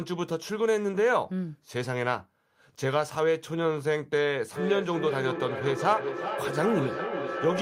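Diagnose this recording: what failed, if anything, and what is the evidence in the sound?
Call processing failed: a feedback echo between two devices starts at 4.56 s and runs to the end at 7.61 s. The sound returns at roughly 400 ms intervals, peaking at about 6 dB below the direct speech, because one device's microphone recaptures the other's playback, which neither echo canceller removes.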